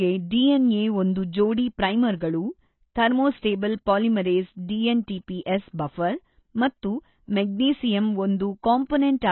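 Speech runs through heavy AAC compression from start to finish, likely AAC-LC at a very low bitrate near 16 kbps. Nothing survives above 4.1 kHz, and the remaining band warbles and fizzes on sibilants, which sets it apart from a plain low-pass filter's clean dullness.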